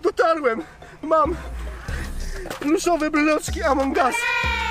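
Nothing stood out on listening.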